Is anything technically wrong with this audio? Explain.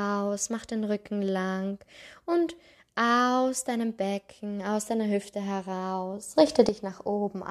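Yes. From 6.36 to 6.69 s there is a sudden gain jump of about 10 dB. The speech and background noise step up together, likely from digital gain applied without a ramp.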